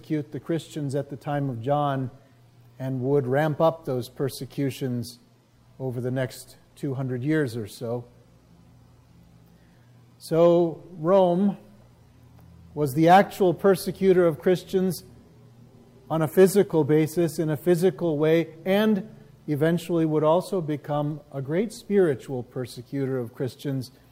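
Nothing in the audio stood out as a technical fault on listening.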